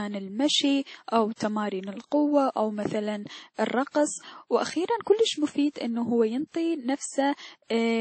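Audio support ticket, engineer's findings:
Likely transcoding between lossy codecs across full clip, probably an earlier WMA encode re-encoded to MP3. Second encoder spending bits on first encoder's artefacts, stacking its own. Speech bandlimited, nothing above 8.4 kHz. Two distinct artefact textures audible together, consistent with low bitrates around 48 then 32 kbit/s.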